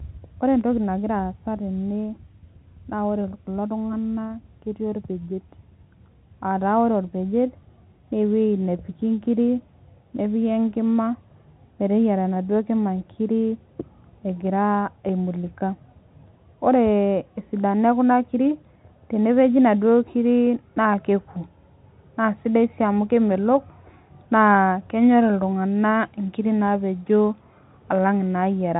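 No technical faults are audible.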